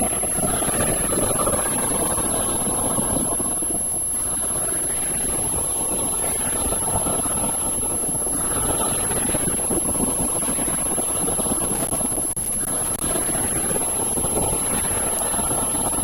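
At 3.92 s the audio skips forward with no gap, which is likely a dropped buffer (overrun) losing around 40 ms of sound. From 11.54 to 13.25 s there is irregular crackling and scratching: loose connector crackle, where a worn or dirty contact repeatedly breaks and remakes the signal path.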